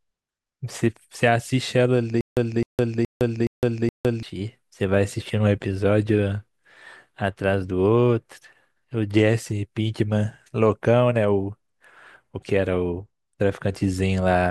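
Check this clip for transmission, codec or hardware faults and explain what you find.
There's one clear fault, a stutter with silent gaps, running from about 2.21 s to 4.23 s. A short fragment of roughly 259 ms plays, then dead digital silence for about 161 ms, and the same fragment comes back five times on a steady 420 ms cycle. The likely cause is a stalled stream or player re-serving its last buffered chunk on each retry and then running dry. Whatever audio belonged in that stretch is simply gone.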